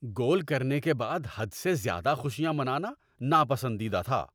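No technical faults can be heard anywhere in this recording of speech.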